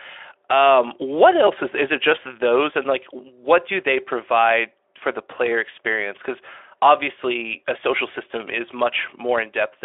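The speech contains no audible technical faults.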